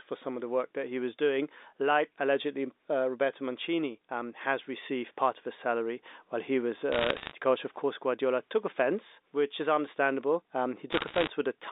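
Right after "salary while he was", from 6.92 to 7.32 s, and again after "offense which is understandable", from 10.92 to 11.30 s, bit errors on the digital phone line add crackle over the speech. Corrupted bits in the G.711 stream (around one to one and a half percent of bits in each burst) each knock a single sample off its value, and hits on high bits or the sign produce sharp ticks that merge into crackle. A waveform shows isolated one-sample spikes, and a spectrogram shows thin full-band vertical lines across the band-limited telephone spectrum.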